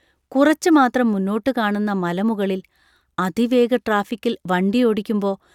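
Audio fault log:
No faults are heard in this speech clip. Nothing in it calls for an entry in the log.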